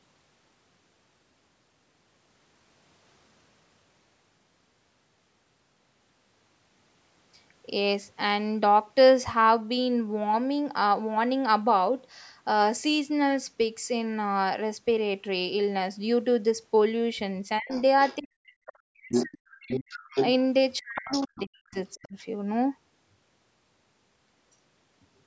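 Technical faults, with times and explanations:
17.59–17.71 s, 18.19–20.02 s and 20.79–22.16 s, speech suppressed in double talk: the talker's level collapses in pieces, first as a brief dip of roughly 30 dB, then as deeper gaps of about 40 dB spread across much of the two longer stretches. These dips line up with the other side speaking, so the likely cause is an echo canceller that couldn't tell the near talker from loudspeaker echo and attenuated everything to be safe.
17.69–18.16 s, 19.1–20.28 s and 20.98–21.98 s, other side's voice leaking through: a second voice sits under the talker, at about 20 dB down in the first stretch, roughly level with the talker in the second, and around 15 dB down in the third. This is likely residual echo: the far side played from the device's loudspeaker reached the microphone and the canceller left part of it in, right where it was also ducking the near speech.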